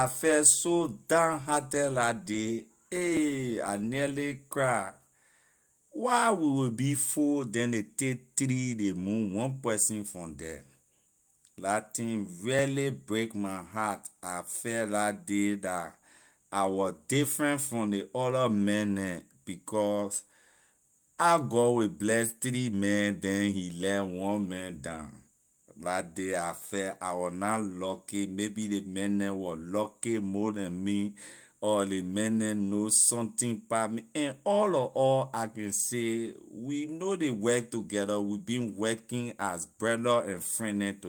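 At 3.17 s the speech jumps, likely a dropped buffer (overrun), where roughly 20 ms got overwritten before being read and the edges spliced together.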